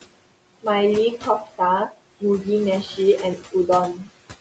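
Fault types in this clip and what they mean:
Noise suppressor artifacts: The suppressor estimates the steady room noise and lowers those bands frame by frame, cutting the background by about 21 dB. On a spectrogram the noise floor collapses in the pauses and fills back in under the speech, so the waveform's gaps look unnaturally clean.
Speech cut by the noise suppressor: At 3.36 to 3.69 s and 3.95 to 4.08 s the suppressor treats parts of the speech as noise. It pulls them down by up to about 13 dB and about 9 dB, around a tenth of a second each, so they sound swallowed. The waveform envelope shrinks and the spectrogram shows faded patches.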